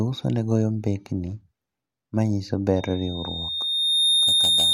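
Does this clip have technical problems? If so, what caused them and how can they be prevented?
Yes. From 2.76 s to the end at 4.73 s a loudspeaker feedback squeal takes over the speech: a single tone at 3.7 kHz swells over roughly a second and a half until it sits at about 5 dB above the speech. The microphone is hearing the loudspeaker it drives, and at that frequency the round-trip gain exceeds one, so the tone feeds itself. A spectrogram shows a bright horizontal line at 3.7 kHz, strengthening steadily. Keeping microphones out of the speakers' coverage and lowering gain, or notching 3.7 kHz, prevents it.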